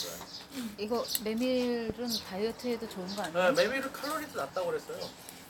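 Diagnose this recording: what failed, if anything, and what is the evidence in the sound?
A loud pop at 1.90 to 1.92 s, a single sharp transient around 15 dB above the surrounding audio, with the material continuing unbroken beneath it. The likely stage is analogue wiring: a voltage step from a plug, switch or static discharge added to the signal path.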